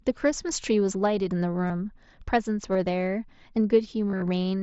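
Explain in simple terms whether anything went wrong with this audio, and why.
Concealed Bluetooth headset packet loss occurs at 1.67 to 1.70 s, 2.73 to 2.75 s, and across a short patch from 4.10 to 4.22 s. Small chunks of the signal between the headset and the phone went missing: around 20 to 30 milliseconds in each of the first two spots, and about 80 milliseconds in all, scattered in pieces, in the last patch. The phone covered each gap by repeating a closely matching piece of the sound just before it. Because the gaps are brief, they come across as short buzzy blips rather than silences.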